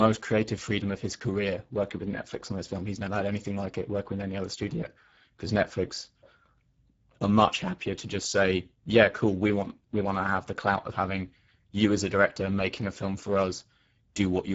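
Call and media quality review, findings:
Speex codec artefacts, throughout the speech. Plainly audible hoarse, noisy grain from a starved CELP excitation, consistent with roughly 10 kbps. Spectrogram: smeared harmonics, diffuse noise-like fill above 4 kHz, nothing above 7.7 kHz. Component: legacy VoIP encoder at low quality setting.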